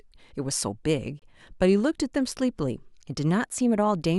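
A gap between stream segments opens from 1.19 to 1.22 s. Two consecutive segments' timestamps leave 25.8 ms uncovered, so the player inserts silence there. The speech cuts out with hard edges and resumes intact. Nothing is lost, only delayed.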